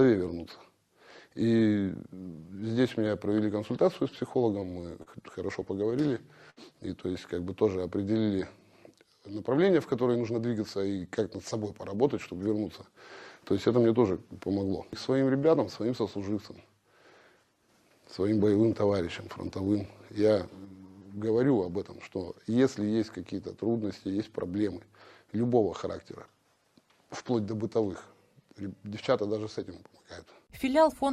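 Between 4.19 and 6.60 s, packets went missing or arrived late in scattered short gaps, about seven of them. Each time the receiver covered the hole by extending the sound it had just played. Roughly 150 ms in total was patched, about 7 percent of the stretch, with the longest gap near 70 ms. The audio stays clear through this passage but is dotted with brief ticks, small smears and momentary hiccups where the patches sit.

From 10.02 to 10.52 s the jitter buffer had built up more audio than it wants to hold, so the receiver made a jitter buffer speed-up to shrink the backlog. It cut out tiny slices of a pitch period or a few at a time, removing around 70 ms in all. Playback runs at 112 percent speed over that half second with the pitch unchanged, so the sound briefly feels rushed and pushed forward.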